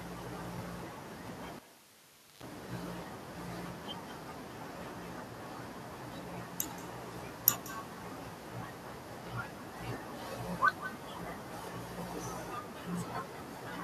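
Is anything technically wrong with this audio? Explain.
Yes, two things. An echo with no canceller runs through the whole clip. The far end is playing the call over a loudspeaker and its mic is feeding it back, so every phrase gets a faint, thinner copy around a fifth of a second later, sitting about 16 dB down.

Then from 1.56 to 2.43 s there's a cable pulled and plugged in while live. You get a pop, the sound drops out for about 0.82 s, then a 125 ms burst of 50 Hz mains buzz as only the tip makes contact, and a second pop when it reconnects.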